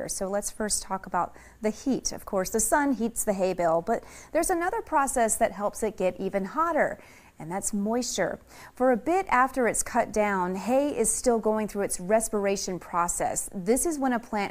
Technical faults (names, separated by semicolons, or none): none